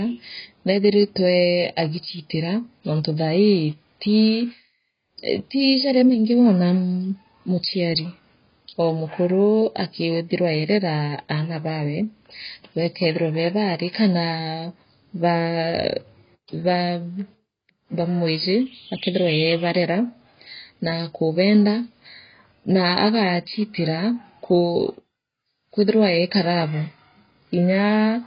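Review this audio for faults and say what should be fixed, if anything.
Heavy compression damage runs through the whole recording. The speech sounds dull and smeared, with a warbling, fizzy edge on sibilants, and nothing at all is present above 5.1 kHz. This is likely AAC compression, with AAC-LC starved of bits and a low bitrate around 16 kbps. To save bits, the encoder discards the upper band, leaves holes between harmonics and quantises what remains coarsely. On a spectrogram this shows as a hard horizontal ceiling at 5.1 kHz, with patchy, blotchy energy below it. Encoding at a higher bitrate, or keeping a lossless master, would prevent it.

From 13.01 to 15.88 s a thin, steady whistle sits behind the speech, swelling and fading slowly in level and well below the speech itself. This is a feedback whistle at 5.8 kHz, likely caused by a loudspeaker-to-microphone loop sitting just at the edge of instability, so one frequency rings on without building up. 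On a spectrogram it appears as a single bright horizontal line at 5.8 kHz, above the empty band left by the codec and lasting almost 3 s. The waveform barely shows it. Lowering monitor gain, repositioning the microphone or adding a notch at that frequency would prevent it.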